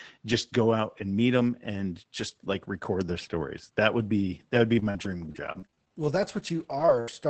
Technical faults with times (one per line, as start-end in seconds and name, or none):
4.79-7.09 repeated packet loss (robotic sound)